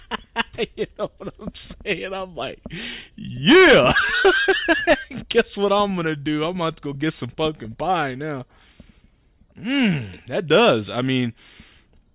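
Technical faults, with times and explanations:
Nothing stood out as a technical problem anywhere in the audio on listening.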